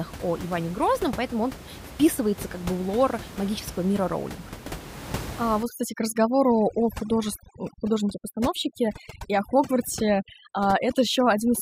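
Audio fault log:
5.63–11.61 s: overdone noise removal. The denoiser's set far too aggressive, switching off any band that drifts near its noise estimate. The room noise, about 14 dB under the speech, drops and breaks up into chirpy sparkles, and the softer parts of the speech go too.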